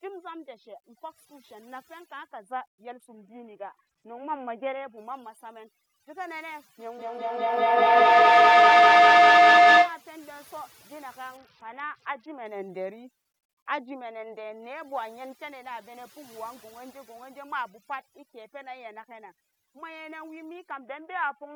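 Overdone noise removal runs through the whole speech clip. The noise reduction was set too aggressively, so it pushes individual frequency bands down or out whenever they sit close to its noise estimate, taking the softer parts of the voice with them. The background drops and breaks up into small twinkling specks.

A Bluetooth SBC bit pool drop begins at 2.91 s and lasts to 4.98 s. The link appears to have been congested, and the sound fits the phone cutting the SBC bit pool from 31 to about 6, which is roughly 55 kbps. With so few bits, the highest sub-bands receive almost nothing and the rest are quantised coarsely. The treble goes dull and a gritty noise rises until the rate recovers.

Feedback howl builds from 6.8 s to 10.08 s. Two devices in the same room are joined to the call, and each pass from microphone to loudspeaker and back adds level. The repeats grow instead of dying away and narrow to the frequencies the loop favours, here around 700 Hz. 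The howl peaks about 20 dB above the speech, with a loop delay of roughly a fifth of a second, before it is cut off.

The same SBC bit pool drop returns from 11.37 s to 12.46 s and again from 20.71 s to the end of the clip, with the same dulled top end and gritty texture each time.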